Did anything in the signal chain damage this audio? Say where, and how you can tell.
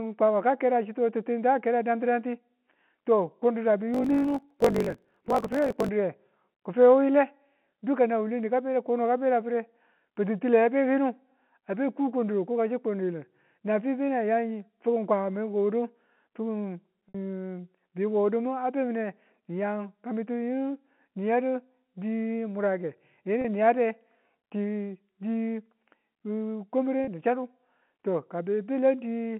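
Yes. From 3.92 to 5.89 s there's a block size mismatch (truncated) at the driver or buffer stage. A 50 Hz buzz rides the speech, which runs about 1.16 times fast. Each block's tail, which fits 1024-sample writes, gets dropped.

The network side shows packet loss with pitch repetition at 17.08 s (60 ms), 23.41 s and 27.04 s (30 ms each), the last just before "ni chaddu". The receiver repeats the last pitch period, so the short gaps sound briefly held and buzzy, and the longer one fades further.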